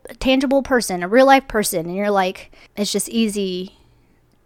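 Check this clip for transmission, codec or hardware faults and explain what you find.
Nothing in this speech recording points to a fault. The sound holds steady throughout, with nothing that calls for a closer look.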